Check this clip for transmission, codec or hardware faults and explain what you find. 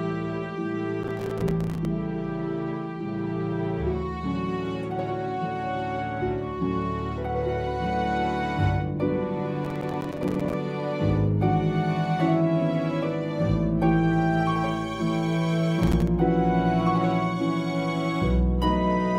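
Three bursts of processor overload crackle occur, at 1.03 to 1.85 s, 9.65 to 10.54 s and 15.83 to 16.08 s. In each, the processor repeatedly failed to fill its audio buffers in time, and each missed buffer of about 5 ms came out as silence. Roughly 10 to 40 of these tiny hard-edged gaps in quick succession make a gritty, tearing crackle. The waveform shows a dense comb of near-silent dropouts, and the spectrogram shows vertical broadband streaks across each burst.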